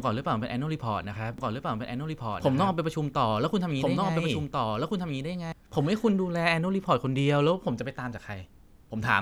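From 1.38 s to 5.52 s the speech runs as a doubled audio track: a full-band copy about one and a half seconds late and a few decibels quieter, likely from a second, slower capture path. Unlike an echo, it has no decay or room colour and switches on and off abruptly.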